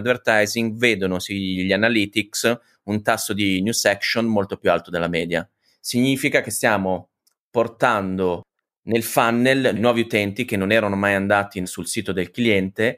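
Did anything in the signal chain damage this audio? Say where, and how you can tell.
No, nothing in the chain seems to have left a mark here; the speech comes through the way it went in, without any point where a stage along the way gives itself away.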